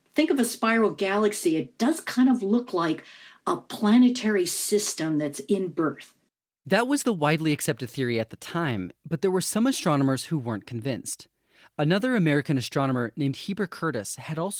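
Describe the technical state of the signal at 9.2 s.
At 9.2 s the speech is intact, with only the light, full-band coloration of Opus voice compression running in its hybrid mode at about 24 kbps.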